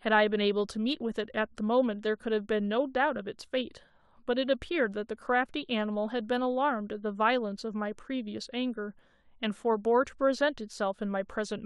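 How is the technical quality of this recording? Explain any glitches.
No technical glitches can be heard in the recording. There is nothing in the audio that needs explaining at any point.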